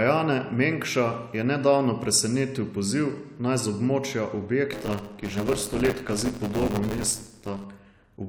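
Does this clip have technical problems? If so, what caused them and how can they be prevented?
Yes. A robotic 100 Hz rattle over the speech from 4.72 to 7.65 s is buffer tearing: writer and hardware reader cross each period, splicing in about a fifth of older audio. Keep the write pointer safely ahead of the read pointer, with larger buffers or higher-priority audio threads.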